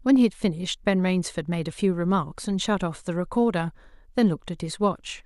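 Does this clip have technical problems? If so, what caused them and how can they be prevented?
No, nothing in this speech recording points to a technical fault, so there is no cause to trace and nothing to prevent.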